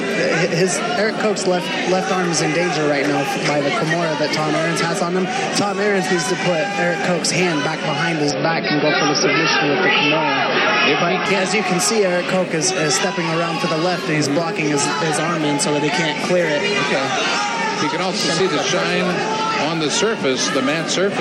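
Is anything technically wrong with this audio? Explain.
Yes, two faults.

From 8.30 to 11.26 s the sound turns dull, with nothing above 5.7 kHz and faint new hiss, likely from the input switching to a poorer device. A spectrogram shows the top abruptly cut off.

From 17.91 to 20.11 s, periodic USB or driver dropouts skip tiny slivers of audio every 0.1 s, heard as regular ticks. The waveform shows evenly spaced small discontinuities.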